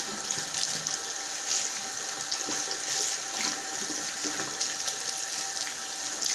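This is a recording of sounds, carried over a call path, and nothing in it is technically wrong.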